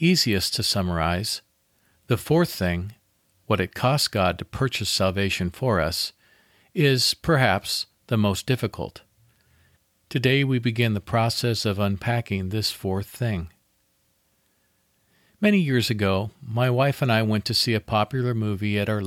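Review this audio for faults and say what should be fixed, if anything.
No faults turned up in this audio, so nothing needs to be fixed.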